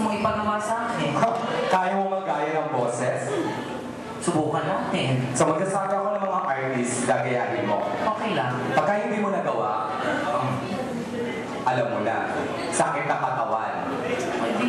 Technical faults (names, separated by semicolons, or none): train of clicks